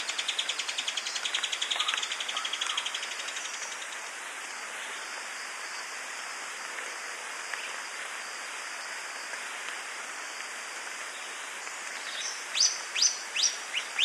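The audio has compressed frames skipped in three places: at 1.99 s, from 12.20 to 12.23 s, and at 13.78 s. At each point, whole blocks of coded audio never reach the output. The sound jumps ahead by about 30 ms, then about 100 ms, then about 150 ms. The jump sizes fit 10 ms frames.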